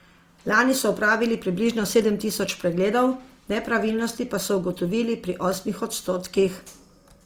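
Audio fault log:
Throughout: Opus compression. The speech carries a plainly audible grainy, rough texture, yet content reaches up to 20.4 kHz. This is likely Opus music mode at a rate that fits 24 kbps, keeping each band's energy but filling detail with folded or noise content.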